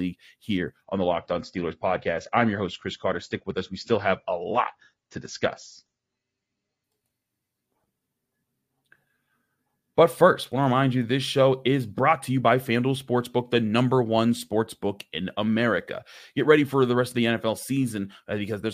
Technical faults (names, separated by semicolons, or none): adaptive stream at a lower bitrate